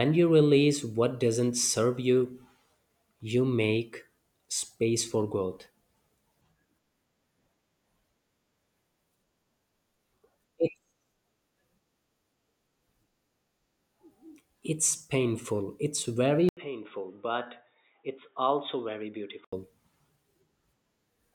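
At 16.49 s, after "it's painful it's very", an 80 ms gap leads into duller speech with nothing above 3.8 kHz and a new noise floor until 19.53 s. That is likely the input switched to a poorer device; the gap and changed background rule out simple filtering.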